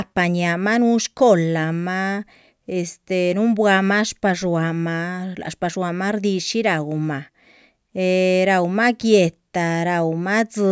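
No technical faults can be heard anywhere in the speech recording; the signal stays continuous and steady throughout.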